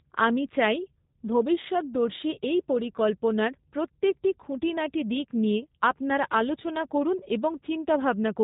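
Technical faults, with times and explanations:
Throughout, G.729 codec: the speech is rebuilt from a vocal tract filter, a pitch predictor and a few coded pulses per frame, so it comes out plainly rough, buzzy and slightly synthetic, with everything above 4 kHz gone. The sound fits G.729A at 8 kbit/s. A simple low-pass filter would only muffle the sound. This codec also flattens and roughens the voiced sounds themselves, giving its characteristic artificial edge.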